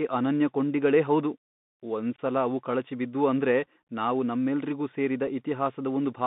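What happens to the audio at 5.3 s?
At 5.27 s, just after "ಅಂದ್ರೆ ನಾವು ನಮ್ಮೆಲ್ರಿಗೂ ಸೇರಿದ", the speech drops out in unconcealed Bluetooth headset packet loss. About 3.8 ms of audio vanishes, which points to a single lost voice packet between headset and phone. Nothing fills the gap with a plausible guess. Silence or an idle pattern sits there instead. The result is a tiny hole with abrupt edges.

That moment also carries the Bluetooth CVSD headset codec heard across the whole clip. The sound is confined to roughly 150 Hz to 3.7 kHz, which fits a 64 kbps CVSD link. CVSD sends one bit per sample, saying only up or down, with an adapting step size. Fast, loud high-frequency movement outruns that step. The damage is plainly audible. S sounds turn scratchy, and a granular hiss runs beneath the speech.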